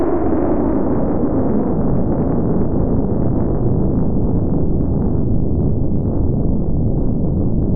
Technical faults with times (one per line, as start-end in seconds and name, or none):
none